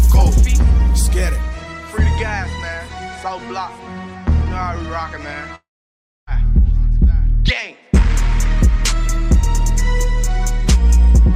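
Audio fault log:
5.55–6.29 s, long network dropout: the sound turns into a short fading buzz, then about 0.63 s of silence. The audio resumes at 6.29 s, with about 0.72 s of it missing. Incoming data likely stopped, so the receiver briefly stretched the last sound, then gave up.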